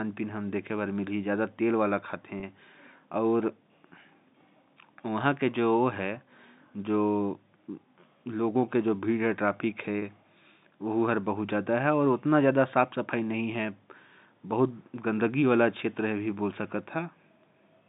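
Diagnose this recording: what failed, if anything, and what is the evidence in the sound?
Packet loss with pitch repetition occurs twice, at 2.40 to 2.43 s and again at 9.99 to 10.02 s, a fault in the network stage. Each gap is about 30 ms, which fits a single dropped packet. The receiver bridged each gap by replaying the last pitch period, so the sound briefly holds with a faint buzz rather than cutting out. Both losses are short enough that the concealment never fades into silence. The 150 Hz to 3.7 kHz telephone band of the G.711 coding remains audible throughout.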